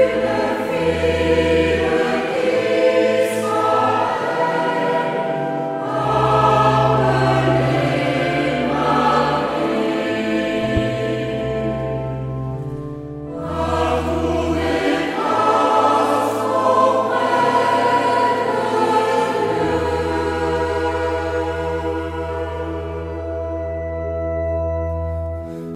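At 10.77 to 10.79 s there is a single loud pop. It stands well above the surrounding sound, roughly 10 dB louder. The cause is likely a brief voltage pulse, such as a plug or switch transient. The sound carries on underneath.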